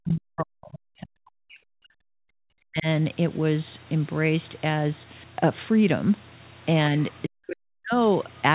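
From the start to 2.86 s the speech sinks by roughly 40 dB and breaks up, which is likely speech suppressed in double talk: the echo canceller ducking the talker while the far side spoke. Unlike a dropout, the sound thins and returns rather than cutting cleanly. Between 6.98 and 7.04 s a faint scrap of another voice, about 30 dB under the speech, is likely the other side's voice leaking through as uncancelled echo. It is heard as a separate voice, not a dip in the talker. The same ducking likely returns from 7.28 to 7.97 s.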